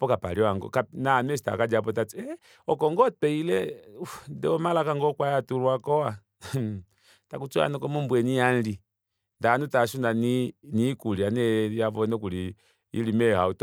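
No technical faults can be heard anywhere in this speech recording. Nothing in it points to a problem at any stage of capture, processing or playback.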